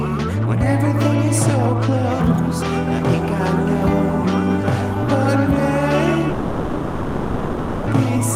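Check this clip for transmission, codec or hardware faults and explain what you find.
One fault stands out: a long network dropout from about 6.29 s to 7.89 s. For roughly 1.6 s, the sound is replaced by a continuation of what came just before, heard as a buzz or hiss that fades out. It never drops to silence, and the audio then resumes further on with that stretch missing. This is likely a transmission gap in which no packets arrived and the receiver's concealment filled the hole by extending the last received sound. On a waveform, the envelope decays over the gap. A spectrogram shows smeared, repetitive bands with no new detail, then an abrupt return of normal content at 7.89 s.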